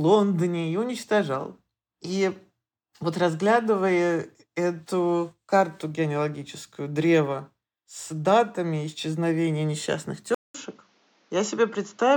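At 10.35 s, just after "с датами исчезновения несчастных", a 200 ms gap opens and the speech returns duller, with nothing above 7.3 kHz, a faint new background hiss and no clear level change, most likely an input switched to a poorer device for the remaining audio.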